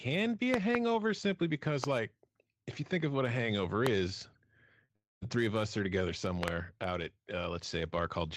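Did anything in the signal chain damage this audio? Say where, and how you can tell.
Yes. Loud pops sit at 0.54–0.77 s (two), 1.84 s, 3.87 s and 6.43–6.50 s (two), each about 20 dB above the speech, which continues underneath. They are likely analogue or driver glitches. The waveform shows isolated spikes. On a spectrogram, each is a thin full-height vertical line.

Short concealed packet loss appears at 4.85–4.91 s, where 40 ms went missing, and at 4.93–4.96 s, where 20 ms did. This is a network and decoder fault. The receiver stretched the preceding sound across each gap, so the spectrogram shows briefly frozen, smeared harmonics rather than gaps. It is heard as a quick wobble.

A long network dropout follows from 4.96 to 5.24 s, with about 260 ms lost, likely from packets that stopped arriving. Concealment extended the last sound as a fading buzz, and about 210 ms of this stretch is near-silent. 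The waveform decays to flat before the speech resumes, with the missing part skipped.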